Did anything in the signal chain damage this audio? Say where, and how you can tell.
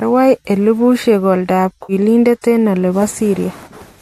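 Yes. Right after "elebusyeek oldab", from 1.83 to 1.93 s, the speech turns briefly smeared and noisy, a phasey blur with no clear detail. That is AAC frame loss with concealment at the codec and network stage. About 60 ms of coded audio never arrived, which fits a handful of short low-delay frames. The decoder filled the gap from the last good spectrum, which produces a noise-like patch rather than silence.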